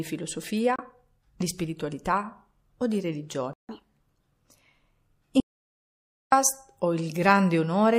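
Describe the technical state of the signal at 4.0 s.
At 4.00 s the catch-up at higher speed is just ending. From 3.69 s, right after "di spiritualità o di", the player resamples its backlog 1.5 times faster, lifting pitch roughly seven semitones. Throughout, the sound swirls watery with smeared attacks. The likely cause is MP3 compression at a low bitrate, around 64 kbps.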